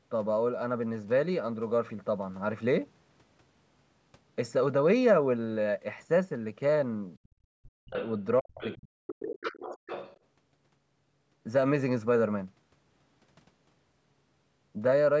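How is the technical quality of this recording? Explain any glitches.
The recording has two related call-audio faults between about 7.4 and 10.2 s, where both ends of the call seem to be talking at once. The audio stops at about 8 kHz, consistent with a call's microphone path.

Speech suppressed in double talk: from 7.43 to 7.96 s and again from 8.40 to 9.45 s, the voice dips sharply, by around 40 dB at its deepest, and partly drops out. This is likely the echo canceller confusing the talker with loudspeaker echo during overlap and turning everything down.

Other side's voice leaking through: a faint second voice appears at 7.96 to 8.12 s and 8.62 to 8.75 s, about 20 dB below the speech, then more plainly from 9.23 to 10.18 s at about 10 dB below. This is likely loudspeaker playback that the echo canceller failed to remove from the microphone.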